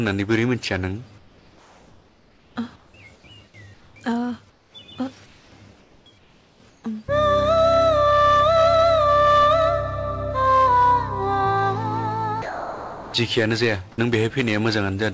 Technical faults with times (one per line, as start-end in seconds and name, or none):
1.18-3.24 comfort noise in place of the background
3.74-3.96 comfort noise in place of the background
4.50-4.74 comfort noise in place of the background
5.26-5.52 comfort noise in place of the background
5.80-6.84 comfort noise in place of the background
12.42-13.14 sound dropped by the voice detector